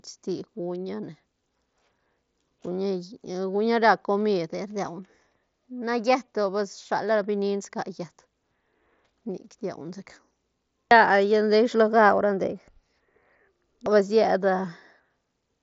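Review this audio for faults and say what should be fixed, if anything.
Drift correction step, 4.55–6.24 s (ending just before "to ba shala ra") and 11.90–13.92 s: playback runs 5.66% fast, raising pitch about 95 cents, likely a clock-matching resampler jumping rate to drain its buffer. To prevent it, correct clock drift with gradual, sub-audible rate adjustments rather than single large steps.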